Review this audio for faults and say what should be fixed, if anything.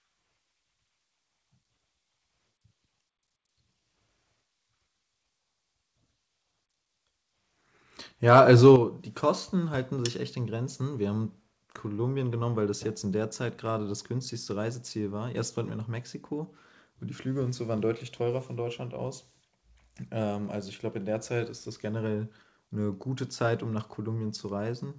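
From 8.31 to 8.71 s the loudest syllables take on a harsh, crackling edge, which is microphone overload, likely from the input volume being set too high. Peaks run about 4 dB past the converter's ceiling and their tops are sheared flat, affecting roughly one percent of samples. Codec coding noise sits evenly across the whole signal; this crackle appears only on the peaks. Fix it by lowering the microphone input gain so peaks leave a few dB of headroom.

At 8.76 s, moments after that distorted burst, the level drops by about 7 dB in a single step. This is the microphone volume stepped down, likely by the call software's automatic gain control reacting to the clipping. A talker turning or moving away fades gradually and changes the room sound, but here voice and background fall together, instantly, and stay down. The band-limited sound with nothing above 8 kHz, consistent with G.722 on the call path, is unaffected by either event. 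Set a correct fixed gain so the automatic control has no overload to react to.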